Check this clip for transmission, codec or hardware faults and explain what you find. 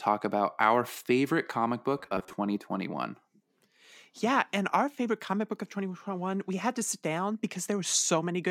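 One fault is present. Robotic sound from repeated short buffers, 1.98 to 2.33 s: new audio likely arrived too seldom, so playback looped about 10.7 ms segments, with roughly half the sound being repeats. This forces a fixed 93.8 Hz buzz, making the speech rigid and metallic.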